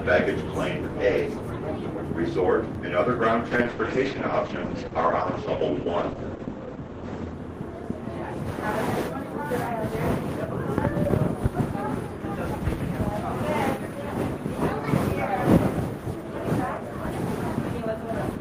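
At 2.75 s a DC step shifts the zero line of the waveform abruptly, heard as a low thump under the continuing sound. On the waveform the baseline jumps off centre, then curves back toward zero as a 5 Hz high-pass drains the offset.

From 3.53 s to 8.59 s a call bitrate drop sets in. The encoder falls from 32 kbps to 9 kbps, staying at the bottom for about 3 s, and the sound turns rough, watery and muffled. A spectrogram shows content above 8 kHz cut away instead of reaching 20 kHz.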